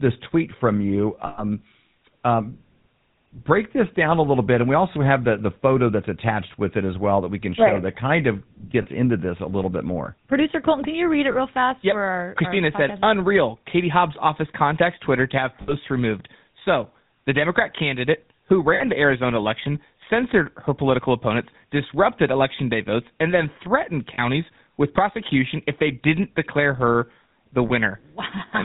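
A buzzy, gravelly roughness sits on the speech from start to finish, with nothing audible above 4 kHz. That is the GSM full-rate codec, and its damage is plainly audible here. The codec rebuilds the voice from a vocal-tract model excited by a sparse, regularly spaced pulse train that keeps only every third excitation sample, so the voice's natural texture gives way to a coarse buzz. The sound fits the 13 kbps full-rate mode.

Brief rough, metallic rings interrupt the speech at seven points, each a held smear where the voice should continue. These are lost GSM frames. The decoder fills each gap by repeating the last good frame's settings, so it sustains a frozen fragment instead of new sound. The ring falls at 1.26–1.43 s, about 120 ms of loss. It recurs at 8.82–8.87 s, between "right that kind of" and "into this a little", about 40 ms. A short one comes at 11.32–11.35 s, about 20 ms. Two more run 15.62–15.75 s and 18.74–18.83 s, about 60 ms each. 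Another falls at 24.14–24.23 s, between "votes and then threatened" and "with prosecution if they", about 40 ms. The last is at 27.68–27.71 s, just after "didn't declare her the", about 20 ms.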